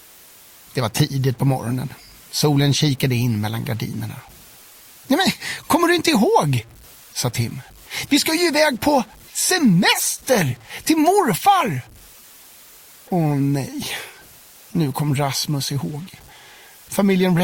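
The signal was likely reduced to about 7 bits by simple truncation with no dither, so every sample is forced onto a coarse staircase of levels across the whole clip. Because the rounding error tracks the waveform instead of being randomised, it turns into grainy distortion that shifts with the sound itself, sitting roughly 30 dB below the signal. Quiet passages become gritty, and the faintest parts collapse to silence or sputter between adjacent steps.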